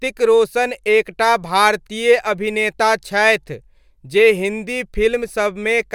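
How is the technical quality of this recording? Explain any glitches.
Nothing goes wrong technically here; there are no glitches to point to anywhere in the recording.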